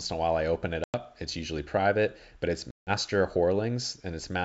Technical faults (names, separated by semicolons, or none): packet loss on an ADPCM call